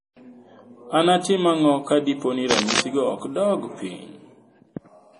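MP3 compression runs through the whole clip: nothing survives above 10.4 kHz, and the speech sounds watery and swirly. That heavy damage likely comes from a low bitrate, around 32 kbps.

Cable scratch noise appears from 2.51 to 2.80 s, between "ang'o ka dipo ni" and "go ok dog". It is a rough, uneven scratching about as loud as the speech, likely from a worn contact being moved.

A sudden gain jump comes at 3.88 s, just after "go ok dog". Speech and background both drop about 4 dB at once and stay lower until the end, likely from a gain change applied without a ramp.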